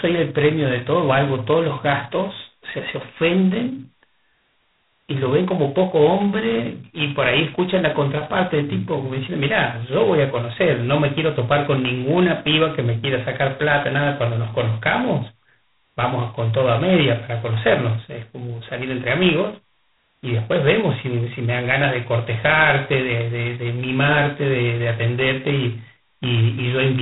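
Speech heard through G.726 ADPCM coding for its whole length, with a heavy, rasping hiss that rises and falls with the speech, which points to the 16 kbit/s mode. A spectrogram shows nothing above 3.9 kHz and grainy noise filling the gaps between harmonics.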